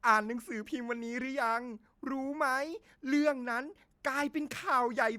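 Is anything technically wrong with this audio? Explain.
No, nothing technically wrong can be heard in this speech recording. There is nothing here that needs a fix.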